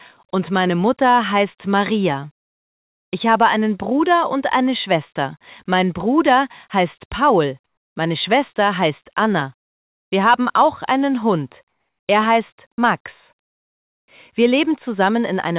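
From 11.68 to 12.08 s, the real background drops out for about 400 ms and a flat, featureless hiss sits in its place, about 8 dB quieter. That's comfort noise in place of the background, likely from discontinuous transmission. The band tops out at 4 kHz throughout.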